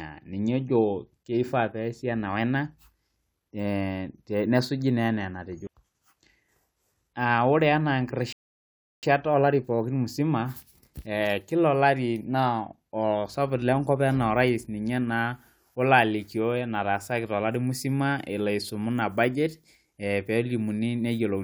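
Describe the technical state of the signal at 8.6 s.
Silence, with the speech frozen mid-flow from 8.33 to 9.03 s, then resuming exactly where it stopped: a rebuffering stall, where playback ran dry and waited, adding 0.7 s.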